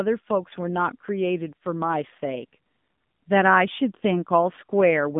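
AMR narrowband mobile codec throughout this speech: nothing above 3.7 kHz survives, and the buzzy, synthetic pulse-coded sound fits a 7.4 kbit/s mode.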